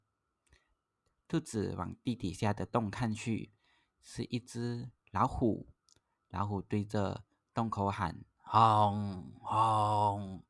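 A speech recording with nothing technically wrong to report.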